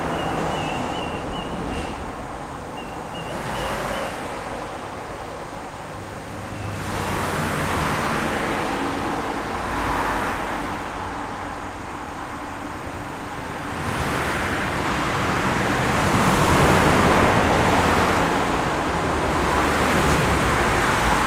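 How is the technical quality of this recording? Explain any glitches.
No glitches or technical faults can be heard here.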